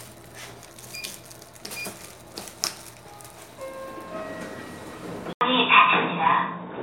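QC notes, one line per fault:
5.33–6.82 s, input switched to a poorer device: recording likely jumped to a narrower-band input. After an 80 ms gap nothing passes above 3.8 kHz, so the sound turns dull and boxy, shifts level by a few decibels, and carries a faint new noise floor.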